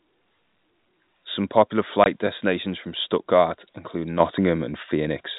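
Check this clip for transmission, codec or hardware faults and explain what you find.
Two faults stand out in the speech.

From 2.04 to 2.06 s, just before "destinations from", the sound drops out completely for 20 ms. This is packet loss filled with silence. Part of the stream never arrived, and the receiver played silence in its place instead of concealing the gap. The length fits a single lost 20 ms packet.

At 4.2 s the whole signal suddenly becomes about 6 dB louder, and the speech and the background noise rise together in one step rather than a gradual swell. This is a microphone volume stepped up. The calling software judged the input too quiet and raised the device's input volume at once, so everything after that instant is captured hotter. The telephone-band G.711 coding shows as the usual ceiling at 4 kHz.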